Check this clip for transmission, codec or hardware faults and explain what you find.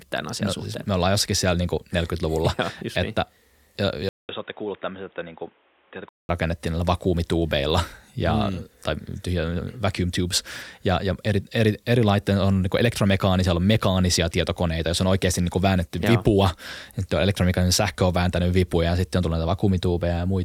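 One fault appears in this speech. From 4.09 to 6.29 s, just as "rakennettiin näillä vakuumituubeilla ja" begins, the input likely switched to a poorer device. After a 200 ms silence, the sound turns boxy, nothing above 3.8 kHz, about 10 dB quieter, with new background noise. The gap and changed noise floor distinguish it from a mere filter.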